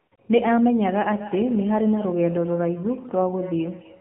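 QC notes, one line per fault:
throughout: AMR narrowband mobile codec. The speech has that flat, boxed-in phone quality with nothing above 4 kHz, and at 7.4 kbps the vocal-tract model and its sparse pulse excitation leave a plainly audible buzzy, synthetic edge on the voice.
0 to 0.12 s and 0.16 s: AMR comfort noise. The opening stretch and a 20 ms gap just after it are filled with a smooth, steady hiss instead of the real room, because the phone stopped sending speech frames and the far end generated noise to cover the pause.
1.08 s to the end: feedback echo between two devices. From here each phrase comes back roughly every third of a second, thinner and ringier, peaking at about 16 dB below the speech, since a second device in the room replays the call into a microphone its canceller can't clean.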